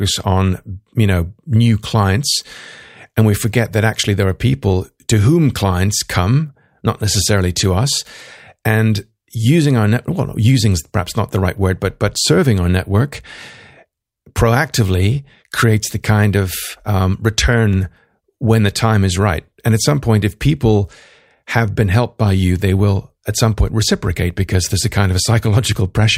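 Speech, and nothing in it is technically wrong.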